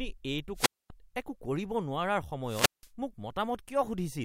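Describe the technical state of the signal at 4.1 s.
At 4.1 s the speech signal is intact, with no audible dropout, distortion, clipping or other fault.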